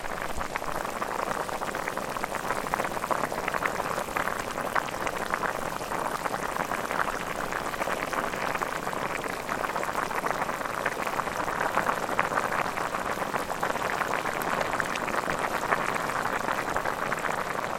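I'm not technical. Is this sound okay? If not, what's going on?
Yes, it's fine: nothing in this recording sounds broken or glitchy, so there's nothing you need to worry about.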